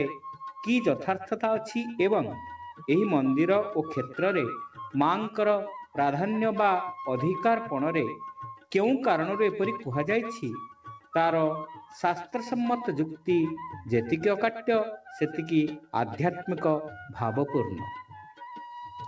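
At 8.55 s, and again from 10.74 to 11.12 s, the noise suppressor mistakes the sound for noise and clamps down by about 12 dB. Those stretches sink in level, against a band topping out near 8 kHz.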